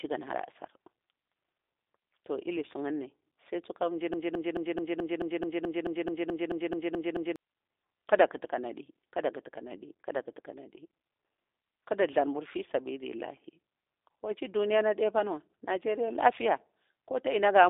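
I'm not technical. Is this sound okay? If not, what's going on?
No. The speech runs through a G.729 codec for the whole clip, the kind of squeezed digital phone line used for internet calls. It rebuilds speech from a rough model of the voice, not the actual sound, so everything above about 3.7 kHz is gone. The speech comes across muffled, slightly rough and a little synthetic. The words stay understandable, but the damage is plainly audible.

There is also a broken-record loop from 4.14 s to 7.36 s, right after "ilisuni sai tsuka njir". A snippet about 0.22 s long repeats 15 times back to back, like a stuck record. The player or stream most likely stalled and kept resending the last scrap of audio it had. Whatever should have been heard during those three seconds is missing.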